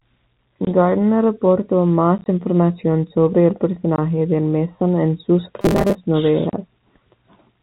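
Speech heard over a G.711 telephone path, so the band stops at 4 kHz, with two kinds of fault. The first is packet loss filled with silence, heard as hard-edged dropouts. They occur at 0.65 to 0.67 s (20 ms), at 2.18 to 2.26 s (about 40 ms of gaps scattered over 80 ms, none longer than 20 ms, just before "información sobre el"), at 3.96 to 3.98 s (20 ms, right after "información sobre el"), and at 6.50 to 6.53 s (30 ms). The gap lengths step in 10 ms units, which points to 10 ms packets. Each lost packet was replaced with digital silence rather than concealed. The second fault, from 5.61 to 5.95 s just after "en sus", is a rigid metallic buzz at 200 Hz that still loosely follows the speech. This is robotic sound from repeated short buffers. Its likely cause is audio arriving too slowly, so the playout side looped the last 5 ms of audio, which is one period of 200 Hz. Roughly half of the audio in that stretch is repeated material, and the skipped speech is lost.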